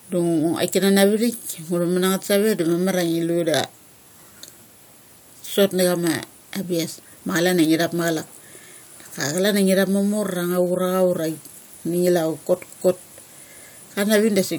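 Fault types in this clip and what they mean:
Nothing stood out on listening to the speech here.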